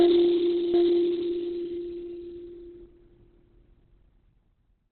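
From the first moment the music has the muffled, hoarse narrowness of heavy Opus compression. Nothing reaches above 4.3 kHz, which points to the encoder likely dropping into its narrowband speech mode at a very low bitrate, around 12 kbps.

Between 0.74 and 2.86 s there's a doubled audio track. A second full-band copy trails about 0.7 s behind and a few dB quieter, likely a second capture or an edit holding two copies out of step. It cuts in and out abruptly, with no decay or room colour.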